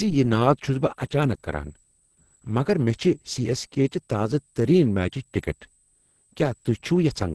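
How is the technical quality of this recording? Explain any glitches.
Technical quality is poor: two faults run through the whole speech clip.

Across all of it sits a switching supply whistle, a faint high tone wandering between 7.7 and 8.4 kHz, about 40 dB below the speech. A power converter cycling in an audible burst mode, or beating with another converter, produces it. Unlike a steady mains hum or fixed interference tone, its pitch drifts.

The speech itself sounds muffled, hoarse and grainy, with nothing above 12.1 kHz. The likely cause is heavy Opus compression: a narrowed band and roughness, not MP3-style swirling holes, point to its hybrid mode at a low rate around 12 kbps, filling starved bands with noise.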